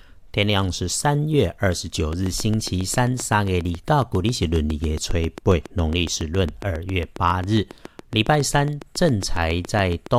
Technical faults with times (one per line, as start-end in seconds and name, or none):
2.13-10.07 train of clicks